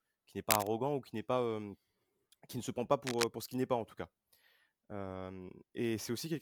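Two short bursts of cable scratch noise cut across the speech. The first runs from 0.50 to 0.67 s, after "qui n'est" and before "ou qui n'est". It sits a little above the speech level. The second runs from 3.07 to 3.25 s, after "ne se prend pas" and before "euh pour ce qu'il", at roughly the level of the speech. Both sound like dense, ragged scratching. A worn cable or connector being moved likely caused them, its contact flickering.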